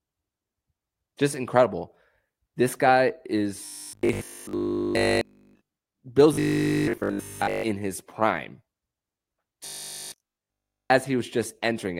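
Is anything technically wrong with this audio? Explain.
Yes. Robotic sound from repeated short buffers occurs at 3.65–5.69 s, 6.34–7.64 s and 9.66–10.90 s. The speech turns into a stiff 50 Hz metallic buzz, likely from a 20 ms chunk replayed almost continuously while new audio is skipped. A spectrogram shows rigid harmonics at 50 Hz spacing, and the waveform repeats one identical 20 ms cycle.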